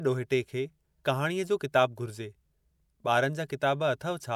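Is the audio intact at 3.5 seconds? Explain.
Yes, at 3.5 seconds the speech plays through cleanly, with no dropout, click, distortion or other fault audible at that point.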